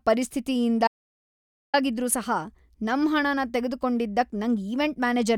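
At 0.88 s the speech cuts off abruptly and the track falls to dead digital silence, with no room tone or background hiss underneath, until it resumes at 1.74 s with "ಆಗಿದ್ರೂ ಸಹ". This is an audio dropout to silence lasting about 0.86 s, and whatever was spoken in that gap is simply missing. The likely cause is a brief loss of the input signal, such as a disconnected device, a failed link or an accidental mute, while recording carried on writing silence.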